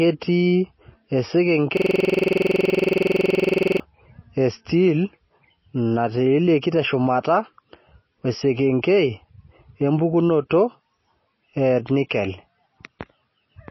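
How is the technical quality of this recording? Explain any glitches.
The recording has three audible faults: one persistent coding artefact and two short disruptions.

Throughout, the audio is band-limited with nothing above 5.8 kHz, and it has a watery, swirling texture. This is likely MP3 compression at a very low bitrate, around 24 kbps.

From 1.77 to 3.80 s, a system hang loop repeats one 46 ms slice of audio dozens of times, producing a 21.5 Hz stutter. That fits a frozen driver cycling a 2048-sample buffer. Normal playback resumes at "e steel".

At 10.5 s, pre-echo puts a brief hiss about 12 ms ahead of an attack. The codec spread its quantisation noise across the block, softening the onset.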